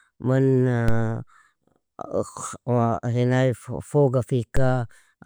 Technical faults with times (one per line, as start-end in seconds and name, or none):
0.88 DC step
4.57 DC step